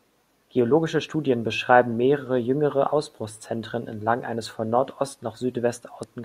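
At 6.03 s there's damaged data in the compressed stream: corrupted bytes throw the decoder off its frame sync, and you hear a quick blip near the end.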